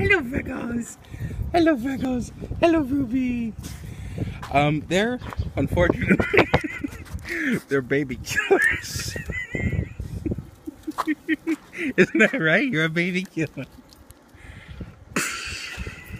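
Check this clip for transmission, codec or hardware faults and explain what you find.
No faults turn up anywhere in the clip.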